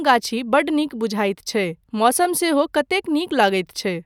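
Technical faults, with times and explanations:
Nothing here jumps out as a technical fault; the speech comes through without any dropouts, glitches or other trouble worth flagging.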